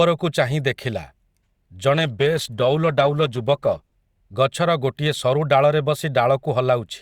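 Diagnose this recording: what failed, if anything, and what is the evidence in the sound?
The failure is at the network stage: an adaptive stream fell back to a lower bitrate from 1.95 to 3.95 s. Codec artefacts thicken, with an abrupt switch at each end and no gap. That fits Opus stepping from 64 to 16 kbit/s.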